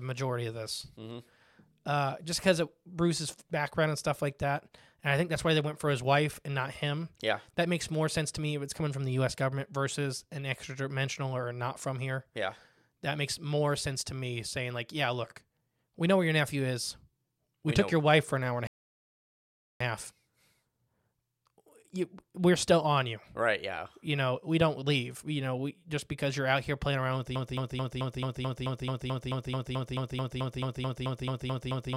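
At 18.67 s, right after "an hour and a", the speech drops into silence and picks up again at 19.80 s with "a half", exactly where it left off. This rebuffering stall adds about 1.13 s of dead air without losing anything: playback ran dry and waited for more data.

From 27.36 s, just after "here playing around with", a fragment of about 0.22 s repeats back to back, roughly twenty times, until the clip ends. This broken-record loop was likely caused by a stalled stream resending its last fragment, so the speech that should follow is lost.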